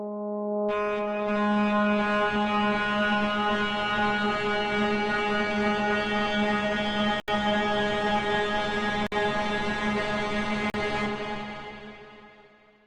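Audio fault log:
7.20 to 10.74 s, blocks of digital silence: the sound drops out at 7.20 s for 80 ms, 9.07 s for 53 ms, and 10.70 s for 40 ms. Each cuts out and back abruptly, with no fade.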